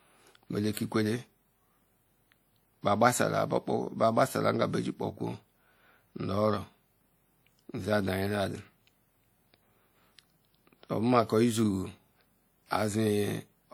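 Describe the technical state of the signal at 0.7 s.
Pre-echo runs from 0.73 to 0.77 s: a short hiss creeps in about 44 ms ahead of a sharp onset. The codec spreads quantisation noise sized for the loud attack across its whole transform block, so the quiet stretch before it fills with noise and the attack itself sounds blunted.

Plainly audible WMA compression lies underneath at this moment, as it does across the whole speech clip, and the smearing points to likely WMA 1 encoding at a bitrate around 48 kbps. Its long blocks leave a washy, ringing quality with hiss that swells and fades with the signal, and nothing remains above 20.1 kHz.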